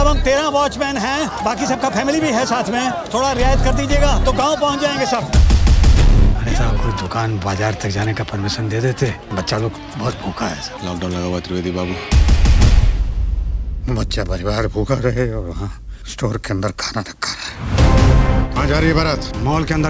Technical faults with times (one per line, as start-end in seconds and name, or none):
none